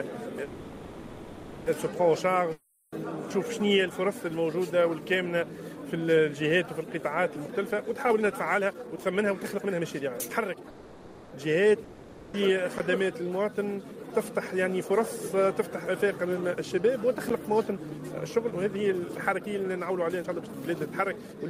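From 0.43 s to 1.68 s there is a call audio freeze, most likely packets held up in transit so the jitter buffer ran dry. The receiver stretches the last sound into a fading buzz for about 1.23 s, then the audio resumes where it stopped. Nothing is lost, but the playback falls 1.23 s further behind.

At 2.52 s a long network dropout begins and lasts to 2.94 s. The last sound is again continued as a decaying hiss for 0.4 s. This time the 400 ms of audio that should have filled the gap likely never arrives, so the sound picks up later on with that stretch cut out.

From 7.48 s to 10.69 s a jitter buffer speed-up plays the audio at about 126 % of normal rate with the pitch unchanged. The receiver is trimming short pitch-period slices back to back to shed excess buffered delay, roughly a second in total, and the passage sounds rushed.

A second call audio freeze runs from 10.70 s to 11.34 s, a 620 ms fading fill with no audio lost and a further 620 ms added to the delay. 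It is followed at 11.84 s to 12.36 s by another long network dropout, where 500 ms is filled with a dying tail and the audio behind it is lost.

Two blocks of digital silence occur, one at 12.78 s (15 ms) and one at 17.29 s (10 ms). In each, the output drops out and back with no fade, heard as a brief tick or dip, which fits an output buffer not being filled in time.

The last fault is a jitter buffer speed-up from 17.58 s to 21.45 s at about 120 % rate. Around 0.7 s is removed, and the sound is audibly hurried through to the end.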